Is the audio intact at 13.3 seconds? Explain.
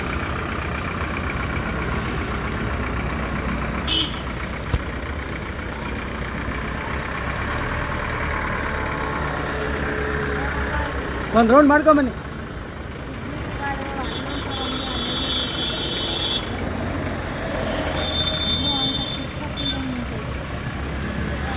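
Yes, at 13.3 seconds the audio plays through intact, with no dropout, click, distortion or other audible fault at that point.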